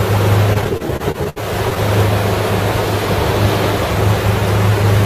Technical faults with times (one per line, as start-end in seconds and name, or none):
0.53-1.78 repeated stalls (stutter)